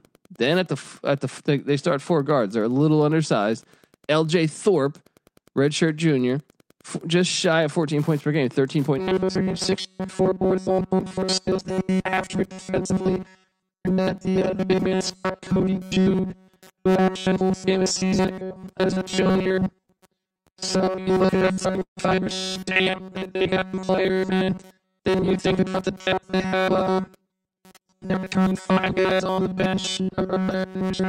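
Wi-Fi interference runs under the whole recording as a steady tick about ten times a second, spaced 102.4 ms apart, which matches a Wi-Fi beacon being picked up and rectified by nearby audio circuitry. It sits roughly 35 dB below the speech. Its regular beacon spacing sets it apart from random crackle or mains hum. The ticks come from outside the signal, so they carry on through the speech and the pauses alike.

From 8.99 s, just after "points per game", to the end of the clip, the speech takes on a rigid, metallic robotic quality with a fixed 188 Hz buzz. This is likely robotic sound from repeated short buffers: audio arriving too seldom, with the gaps filled by looping the last few milliseconds. The buzz fits a loop of about 5.3 ms. Repeats take up most of the stretch, so much of the real audio is skipped. Unlike the Wi-Fi ticking, this buzz has a musical pitch and holds a fixed rate that follows the speech only roughly.

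Between 19.31 s and 21.99 s there are repeated stalls (stutter). The jitter buffer ran empty about two dozen times, and each gap was bridged by extending the last sound, with the longest lasting 147 ms. About 450 ms in all was filled, roughly 17% of that span. Nothing is actually lost. The speech drags and hiccups rather than dropping out, which is what distinguishes it from packet loss.

From 24.33 s to 26.87 s a jitter buffer speed-up trims the backlog. Short pitch-period pieces are cut out over and over, removing about a fifth of a second, so the speech runs at 107% speed and sounds hurried. The pitch stays unchanged, which separates this from a simple playback-rate error that would also raise the voice.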